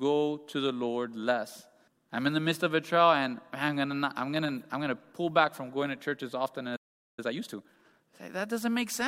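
At 6.76 s, just after "to church as often", the speech cuts to silence for about 0.42 s, until 7.19 s: a playback stall, likely the player running short of data or its thread being blocked.

From 7.19 s to 8.01 s comes time-compressed catch-up, as the player clears its backlog by removing small slices and cross-fading the joins. Speech runs at 1.5 times normal speed, yet pitch stays unchanged, which separates it from a simple speed-up.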